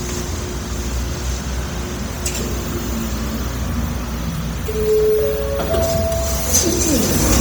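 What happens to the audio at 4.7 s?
At 4.7 s the sound carries heavy Bluetooth LC3 compression damage, present throughout, likely from a low bitrate near 32 kbps: emptied upper bands are refilled with noise, giving a grainy, breathy edge.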